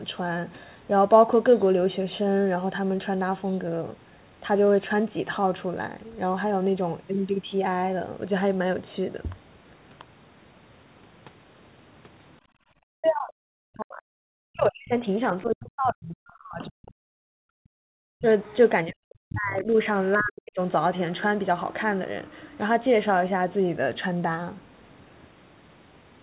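At 12.19 s a very faint scrap of a second voice flickers through for a few tens of milliseconds. Another stretch of it, louder but still well below the talker, runs from 18.43 to 20.24 s. This is the other side's voice leaking through, likely because the device plays the far end on a loudspeaker and the echo canceller left some of that playback in the microphone signal.

From 12.41 to 12.71 s the room sound dips by about 16 dB for roughly a third of a second, then comes back. This is background gated by the echo canceller, which turned the microphone down hard while the loudspeaker was active and released it once playback stopped.

From 12.99 to 18.26 s, and again from 18.93 to 20.59 s, the talker repeatedly sinks almost to silence in pieces, adding up to about five seconds and then about one second. This is likely speech suppressed in double talk: with both sides speaking at once, the canceller could not separate the talker from the echo and pulled both down. 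Throughout the clip the narrowband call codec holds everything below 4 kHz.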